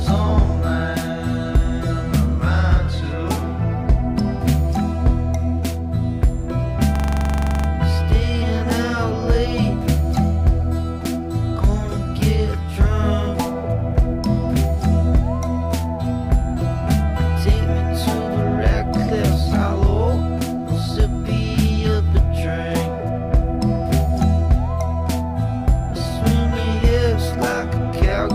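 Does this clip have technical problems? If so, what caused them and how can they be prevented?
Yes. A system hang loop runs from 6.96 to 7.68 s. The computer or its audio driver stalled while the sound hardware kept replaying the same ring buffer, so one 42.67 ms slice of audio repeats exactly 17 times. That loop length fits a 2048-sample buffer. At about 23.4 repeats per second it comes across as a rattling, machine-gun stutter. Little or no audio seems to be lost once playback resumes. To prevent it, keep the audio thread at real-time priority and use drivers that mute or stop the output when the host stops refilling the buffer.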